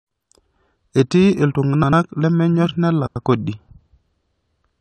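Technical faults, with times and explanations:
1.74–1.93 s, 3.06–3.25 s and 4.47–4.55 s, frames out of order: two neighbouring chunks got decoded swapped, so each stretch plays with its halves exchanged, a garbled flutter, no time lost.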